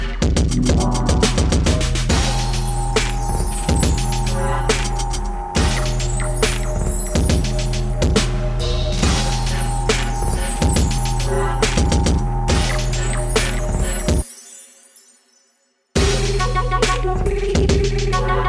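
Nothing technically wrong turns up in this audio at any point, so there's no fault to time or trace back to a cause.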